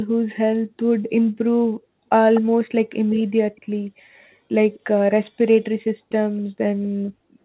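A far-end echo canceller likely let its loudspeaker pickup through, causing echo leak: brief delayed copies of the speech trail by about a quarter second at 2.34–2.41 s (fairly audible), 3.56–3.61 s and 4.75–4.80 s (very faint).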